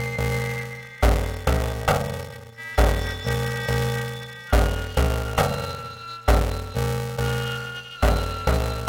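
From start to finish the music carries a harsh, robotic buzz pitched at about 345 Hz, with no clear octave jump in the music itself. This is planar audio read as interleaved. Each 2.9 ms block stores all its left samples and then all its right ones, but playback treats them as alternating left-right pairs. Every block therefore plays twice at double speed, first its left half and then its right, which fits a 128-sample buffer. The blocks are so short that the repeating seam becomes the buzz rather than an audible octave shift.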